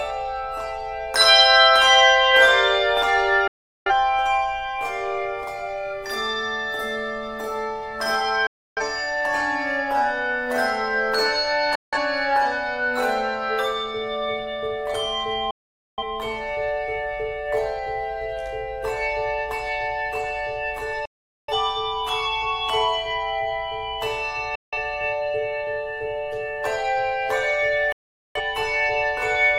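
Digital broadcast dropouts at 3.47–3.91, 8.47–8.82, 11.75–11.98, 15.51–16.03, 21.05–21.53, 24.55–24.78 and 27.92–28.41 s: the receiver lost its frames and muted within about 3 ms. Each gap lasts 0.17 to 0.47 s. The sound cuts off abruptly and resumes later, with that material gone. The waveform and spectrogram show clean, flat-silent vertical gaps.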